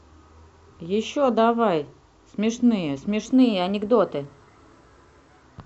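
Speech, with a drift correction step from 3.25 to 5.42 s: the audio abruptly runs 6.3% fast and 105 cents sharp, then snaps back. On a spectrogram, every harmonic jumps upward together and drops back at 5.42 s, likely from clock-matching software rebalancing its buffer.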